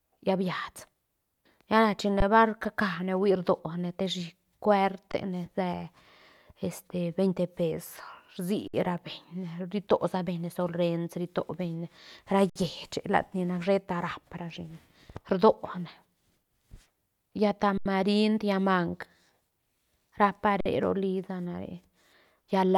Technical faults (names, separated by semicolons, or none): underrun with held sample